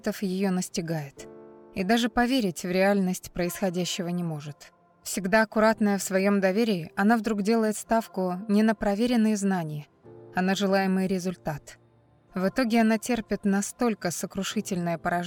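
Nothing stood out as a technical problem when listening to the recording.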